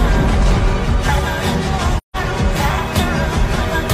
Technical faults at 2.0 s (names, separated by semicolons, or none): AAC frame loss with muting